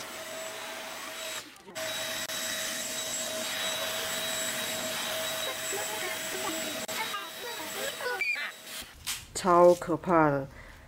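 At 2.26 to 2.29 seconds the sound drops out for about 28 ms. At 6.85 to 6.88 seconds it drops out again, for about 34 ms. Both are gaps at a join of encoded pieces. Each piece was encoded on its own and butted together untrimmed. The encoder's start-up silence and the padded final frame stayed in at each seam. The edges of each gap are smeared by the codec. The sound then resumes where it left off.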